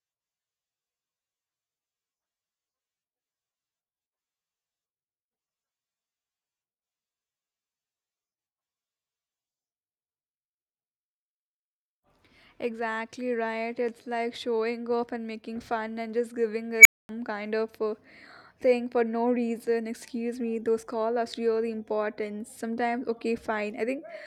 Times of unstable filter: 16.79-17.09

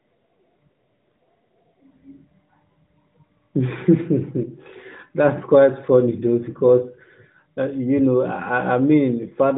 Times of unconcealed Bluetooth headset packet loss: none

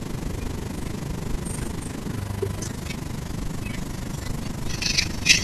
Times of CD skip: none

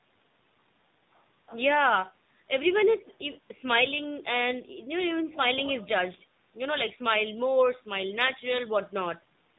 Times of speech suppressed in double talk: none

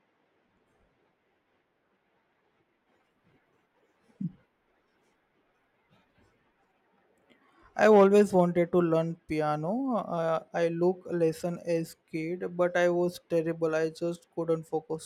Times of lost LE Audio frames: none

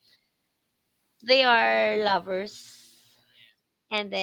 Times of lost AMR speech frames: none

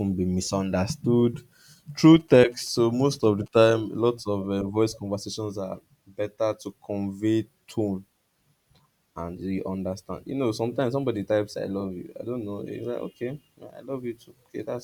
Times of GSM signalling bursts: 2.05-3.72

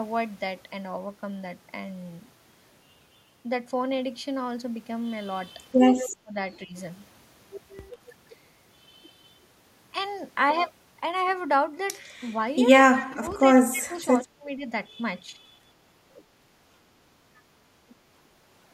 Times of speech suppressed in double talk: 6.22-6.75, 13.02-14.69, 15.22-15.55

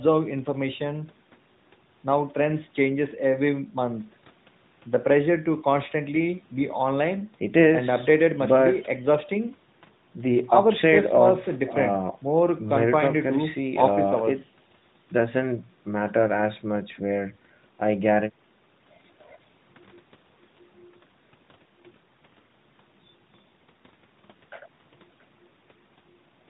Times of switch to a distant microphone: none

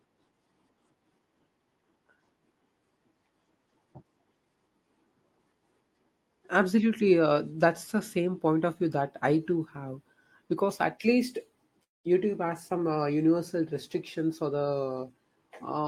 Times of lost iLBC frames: none

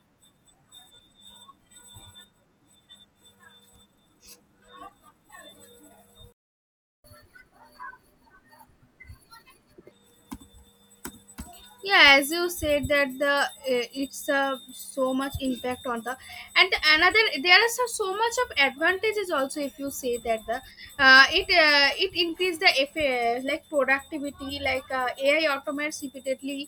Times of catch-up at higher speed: 7.04-9.91

